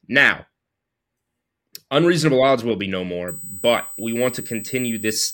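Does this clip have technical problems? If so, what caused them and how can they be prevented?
Yes. From 3.28 s to the end, a USB whine sits under the speech: a fixed-pitch tone at 8 kHz, strongest at its 16 kHz harmonic and roughly 15 dB below the speech. That pitch matches 125-microsecond microframe current pulses leaking through power or ground. Prevent it with a ground-loop isolator or a separately powered interface.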